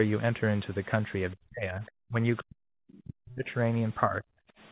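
From 1.34 to 1.83 s the talker's level sinks by about 40 dB, then dips again at 2.08 to 2.17 s (about 25 dB), 2.40 to 3.49 s (about 40 dB) and 4.07 to 4.39 s (about 35 dB). This is speech suppressed in double talk, likely because the echo canceller turned everything down while the far end was also speaking. At 1.86 to 1.91 s and again at 2.94 to 2.98 s, brief scraps of the other side's voice leak through at about 30 dB below the talker. The likely cause is echo the canceller failed to remove from the microphone. These are short, faint fragments of a second voice, not a delayed copy of the talker's own sound.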